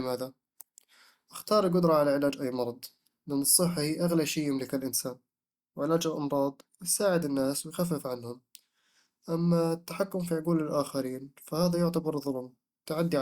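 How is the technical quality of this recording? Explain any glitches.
No glitches are audible anywhere in the recording.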